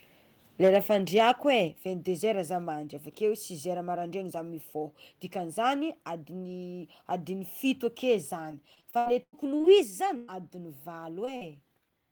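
From 0.63 to 0.76 s the loudest peaks break up with a harsh, crackling edge. This is microphone overload. The likely cause is an input level set too high, so the peaks run about 4 dB past the converter's limit and their tops are sliced flat. Roughly 7 percent of the samples in that stretch are clipped. The distortion sits on the strongest moments of the sound, not spread evenly.

Right inside that overload, at 0.68 s, the level drops by about 2 dB in one step. This is the microphone volume stepped down. The likely cause is the call software reacting to the clipped peaks and pulling the input gain lower. At 1.68 s comes a second, larger step of about 5 dB, which is likely the same automatic correction. Both the speech and the background fall together. Nothing is lost. The clip simply gets quieter.

From 8.51 to 9.69 s the speech turns choppy and robotic. This is repeated packet loss. About ten holes fall close together. 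Each one is patched by stretching the last bit of sound. Around 0.3 s of the span is filled this way, about a quarter of it. The longest gap is about 0.1 s. Pieces of the speech go missing between the patches.

At 9.83 s the level steps down again, by about 3 dB. This is another microphone volume step down. The likely cause is the same gain control trimming the input once more. It is a single abrupt drop, with no distortion of its own.

From 10.17 to 10.41 s there is a burst of packet loss. About 120 ms of speech never arrives. The receiver holds the last sound and lets it fade, so the gap turns into a short buzz or hiss. There is no silence in it. When the speech comes back, the part in between is gone.

Two short concealed packet losses follow. One sits at 11.25 to 11.29 s and lasts about 20 ms. The other runs from 11.37 to 11.43 s and lasts about 40 ms. Each hole is filled from the sound just before it, then blended back into the real signal. 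They sound like brief smears or small wobbles. A quick consonant there can vanish.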